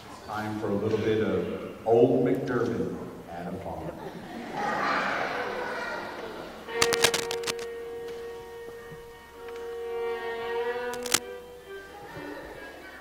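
From 6.82 to 7.64 s, and again from 10.90 to 11.19 s, cable scratch noise rasps over the audio at roughly the level of the sound itself. This is likely a worn cable or connector being moved, its contact resistance jumping erratically. On a spectrogram each burst shows as a broadband smear of irregular vertical flecks; the waveform gains dense, ragged spikes riding on the signal.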